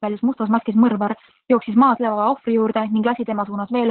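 Throughout, heavy Opus voice compression, consistent with narrowband SILK at about 8 kbps, removes everything above 4.3 kHz, leaving the speech muffled, hoarse and slightly robotic.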